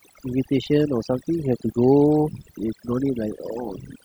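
From start to finish you can hear overdone noise removal. A noise reducer was pushed too hard on a noisy recording, so any frequency band sitting close to its noise estimate gets pulled way down or cut outright, and the quieter parts of the speech get dragged down with it. The background drops and breaks up into little twinkling specks.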